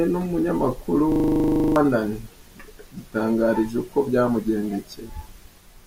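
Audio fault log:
1.12–1.76 s, system hang loop: a 40 ms slice of speech repeats exactly 16 times, giving a rough 25 Hz stutter. The system stalled while the sound hardware kept replaying one stuck buffer. Roughly 0.7 s of speech never plays.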